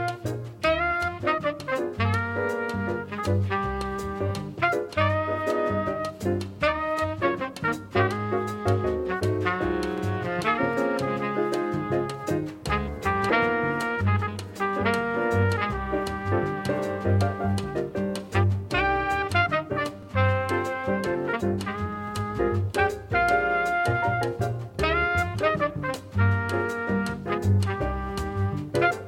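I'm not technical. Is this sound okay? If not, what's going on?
No. There are overlapping chunks. The audio was handled in 10-second pieces that overlap, so about 48 ms repeats, causing stutters at 9.98–10.03 s and 20.03–20.07 s.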